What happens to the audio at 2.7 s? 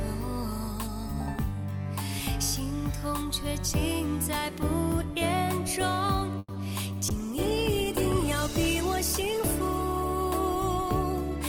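Nothing goes wrong at 2.7 s; the audio plays through that moment intact, with no dropout, click or distortion.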